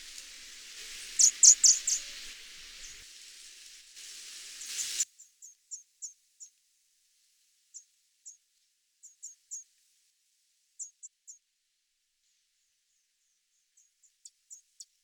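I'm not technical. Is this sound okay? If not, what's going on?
No. Damaged data in a compressed stream causes brief chirps or blips at 1.68 to 1.70, 4.65 to 4.70, 11.01 and 14.03 seconds, where the player misreads broken bits and skips ahead.

One channel inverted: from 5.03 seconds on, the sound drops almost to nothing, likely because one side is flipped and cancels the other.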